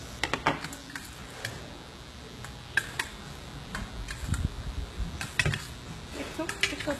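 A mains buzz runs from start to finish. Sharp switching spikes, twice per cycle of 60 Hz mains, leak into the signal. Their harmonics climb far up the spectrum. The result is a steady, raspy buzz, sitting not far below the sound itself.

The whole clip also carries plainly audible codec damage, likely from HE-AAC compression. Nothing remains above about 12.3 kHz. The treble is rebuilt from copied lower bands, so it sounds gritty and metallic. The damage points to a very low bitrate, around 16 kbps.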